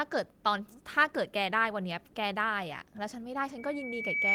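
A speech clip with loudspeaker feedback squeal near the end. From 3.58 s to 4.35 s a single tone at 2.3 kHz rises out of the audio. It swells over roughly 0.7 s and finishes about 10 dB above the signal. The microphone is hearing the loudspeaker it drives. At 2.3 kHz the loop gain goes above one. That tone then feeds on itself. It lasts until the clip ends.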